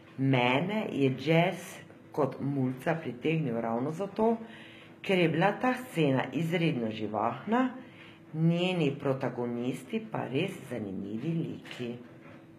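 From start to finish, the upper frequencies of the speech sound synthetic: s sounds come out gritty and lispy, with a metallic sheen that does not blend with the lower voice. This is likely HE-AAC compression, whose spectral band replication rebuilds the treble by copying lower bands upward under a coarse envelope, so the harmonics fail to line up across the crossover. The damage is plainly audible, which fits a low bitrate around 20 kbps.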